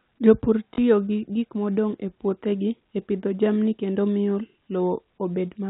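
At 0.74 s the speech breaks into a short robotic stutter lasting 40 ms, to 0.78 s. That is packet loss with the last packet repeated: what sounds like two lost 20 ms packets was filled by replaying the previous one. The run buzzes at about 50 Hz. The telephone-band coding, consistent with G.711, cuts everything above 4 kHz.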